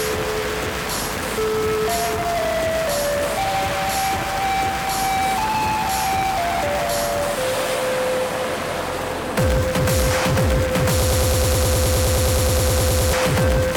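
A stalled player or stream most likely kept resending its last buffered fragment, producing a broken-record loop from 11.02 to 13.13 s. A slice of about 0.10 s repeats exactly, back to back, twenty times, giving a rapid stutter while the sound that belonged there is lost.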